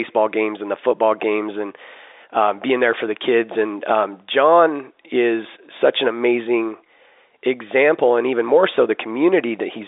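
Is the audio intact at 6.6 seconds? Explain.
Yes, the speech at 6.6 seconds is intact, with nothing there beyond the narrow 300 to 3700 Hz band of ordinary G.711 telephone coding.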